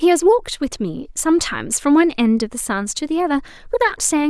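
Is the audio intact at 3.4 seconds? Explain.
Yes, at 3.4 seconds the audio is intact, with no dropout, click, distortion or other fault at that moment.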